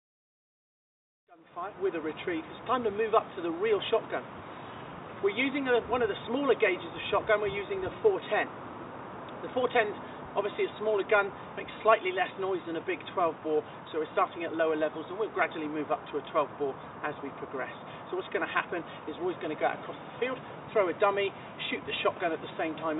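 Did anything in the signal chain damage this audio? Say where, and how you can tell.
No, nothing in the signal chain damaged this audio.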